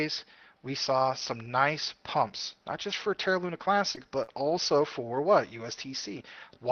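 At 3.95 to 3.99 s and again at 4.23 to 4.29 s there is short concealed packet loss. About 20 ms and then 40 ms of audio arrived too late, and the receiver bridged each hole by stretching the preceding sound, roughly 14 ms and 44 ms of invented signal. This is heard as a brief smear or wobble.

Interleaved with these, at 3.97 to 3.99, 4.27 to 4.29, 4.49 to 4.51 and 4.81 to 4.83 s, come lost packets rebuilt from error correction. Each 20 ms frame is played from a coarse backup copy carried in the next packet, so nothing is smeared or missing. These frames sound rougher and grainier, without the stretched-sound quality of concealment.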